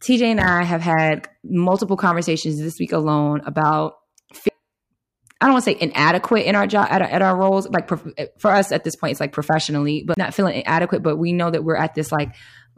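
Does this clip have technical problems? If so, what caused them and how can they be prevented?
Yes. Two CD skips occur in this speech, at 4.49 s and from 10.14 to 10.17 s, just after "point it's like professionally" and before "not feeling". At each, the laser jumped to a different turn of the disc spiral, so the player muted for an instant and resumed elsewhere. This produces a tick and a jump in the speech. On a waveform, each is a flat-line gap with mismatched edges. On a spectrogram, each is a thin vertical broadband line. The first gap is very brief, and the second lasts about 30 ms. Clean and inspect discs, isolate the player from knocks, and rip with error-correcting software.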